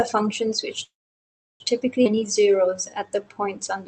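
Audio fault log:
0.83–1.63 s, call audio freeze: The sound stops and a brief fading continuation gives way to about 0.71 s of silence before resuming where it left off. This likely came from delayed packets draining the jitter buffer, so the receiver filled roughly 0.77 s rather than losing audio.
2.04–2.08 s, skip ahead: The sound jumps forward abruptly with only a tiny filled gap of about 11 ms, and the two sides are spliced almost directly. Roughly 0.4 s of audio is missing, dropped on the way or by the jitter buffer while later audio was already waiting.
2.15–3.88 s, jitter buffer slow-down: From here to the end the sound plays stretched at about 88% speed while keeping its pitch, with drawn-out segments. The buffer was rebuilding its reserve by repeating single pitch periods and pause fragments, adding about 208 ms.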